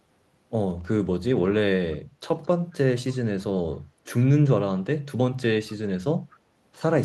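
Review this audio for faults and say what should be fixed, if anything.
Echo leak occurs at 2.43–2.48 s and 6.3–6.38 s: short, very faint scraps of the speech returning 222 ms late, likely because a far-end loudspeaker's echo canceller let part of its microphone pickup through. Unlike room reverberation, this is a discrete delayed repeat rather than a smooth decay. A headset at that end, or a better-tuned echo canceller, would prevent it.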